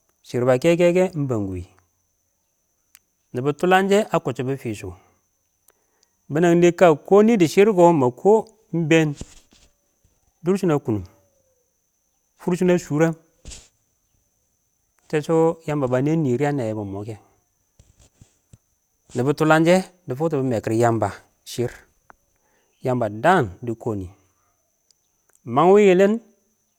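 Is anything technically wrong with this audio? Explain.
No, nothing technically wrong stood out on listening to this speech recording.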